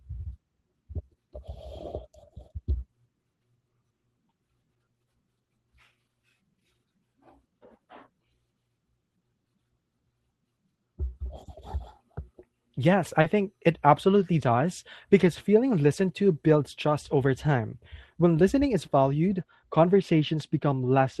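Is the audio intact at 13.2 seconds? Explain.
No. From 13.21 to 13.25 s, just before "think it absolutely does", there is a short concealed packet loss: about 30 ms of the call's audio never reached the decoder in time. The receiver filled the gap by extending the preceding sound, continuing its pitch if it was voiced or shaped noise if it was not, then crossfaded back into the real signal. The result is a brief smear or wobble where the true audio should be.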